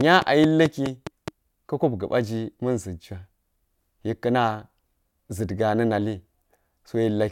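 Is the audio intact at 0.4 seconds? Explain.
No. A train of clicks runs from 0.01 to 1.29 s. About seven regular pulses tick at 4.7 per second, well above the speech, likely from electrical interference.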